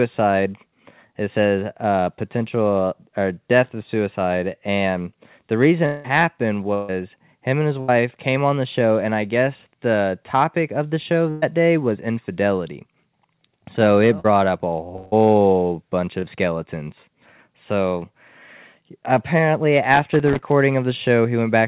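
The speech passes through a call codec with nothing above 4 kHz. From 5.86 to 6.06 s, and again from 14.96 to 15.14 s, a long network dropout is likely. The last sound is stretched into a fading buzz or hiss for about 180 and 160 ms, and that audio never returns. Bursts of packet loss follow at 6.74–6.90 s, 7.80–7.90 s and 11.30–11.44 s. Each gap of 140, 80 and 120 ms is bridged by a held, dimming buzz or hiss. Short concealed packet loss at 14.20–14.26 s and 16.20–16.37 s leaves brief smears, losing 40 and 20 ms. From 19.94 to 20.52 s, loose connector crackle brings irregular scratchy bursts from a contact making and breaking.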